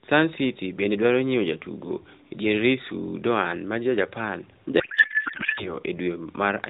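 From 4.80 to 5.73 s the speech collapses into garbled warbling noise: a codec payload misread, with octet-aligned AMR frames decoded as bandwidth-efficient, shifting every field.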